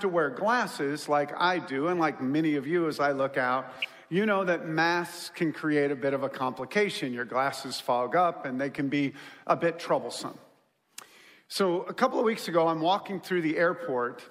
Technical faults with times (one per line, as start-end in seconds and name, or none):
3.76-3.85 DAB burbling
8.75-8.79 DAB burbling